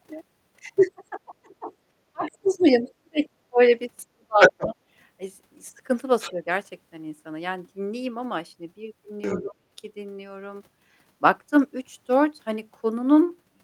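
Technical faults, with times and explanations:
0.89–3.6 s, 4.02–4.75 s, 6.33–6.43 s and 9.42–9.56 s, speech suppressed in double talk: the speech dips and breaks up in pieces, worst in the first stretch, where about a second and a half is lost and the deepest drop is about 40 dB. The later dips are shallower, about 35, 10 and 15 dB. This is likely an echo canceller that met both sides talking together and turned everything down. Unlike a plain dropout, each dip comes right beside the other side's leaking voice.
2.88–2.92 s, 4.4–4.67 s, 6.2–6.32 s and 9.22–9.43 s, other side's voice leaking through: a second voice comes through in short scraps. At 2.88 s it is a faint blip about 35 dB under the speech. At 6.2 s and 9.22 s it sits about 10–15 dB under. At 4.4 s it rises to about 5 dB above the speech. This is likely loudspeaker playback the canceller left in the microphone signal. Unlike room reverb, it is a separate voice rather than a smear of the talker's own.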